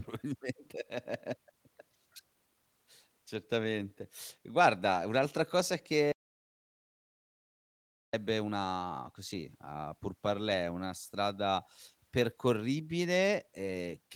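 From 6.12 to 8.13 s, right after "un'altra cosa", the speech hits an audio dropout to silence: about 2.0 s of silence, likely a lost input, resuming abruptly at "una così a pour". Unlike a noise gate, no room tone survives.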